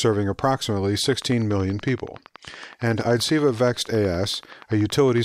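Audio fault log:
1.13 to 5.19 s, train of clicks: a regular ticking starts and runs almost to the end of the speech, at a steady 10.6 clicks per second, around forty clicks in all. Each click has much the same sharp shape and peaks at roughly the level of the speech itself, so they sit clearly on top of it and stay audible in the pauses. The even spacing points to a periodic disturbance, likely electrical interference from nearby equipment or a faulty connection or power supply.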